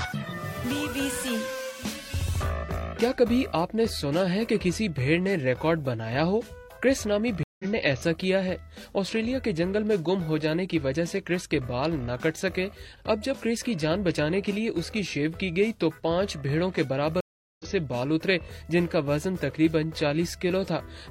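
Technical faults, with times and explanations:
7.43–7.65 s and 17.21–17.66 s, stream reconnect: the connection dropped and the player restarted its decoder mid-stream, leaving gaps of 158 ms and 388 ms. Because the stream kept running during the outage, the sound jumps ahead, skipping about a tenth of a second and then nearly half a second.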